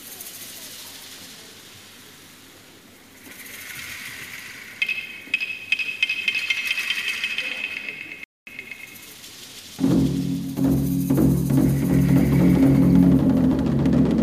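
A playback stall at 8.24 to 8.47 s silences the audio for about 0.23 s, likely because the player's buffer ran dry or its thread was blocked.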